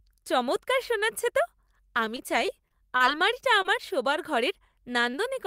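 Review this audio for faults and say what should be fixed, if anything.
From 2.05 to 3.02 s the speech turns choppy and robotic. This is repeated packet loss: gaps up to 36 ms were patched by extending the previous sound.

At 3.62 s and 5.11 s there are brief smears, each from short concealed packet loss. About 20 ms never arrived and was filled by continuing the preceding audio.

A larger jitter buffer, forward error correction and a more stable network path would prevent these dropouts.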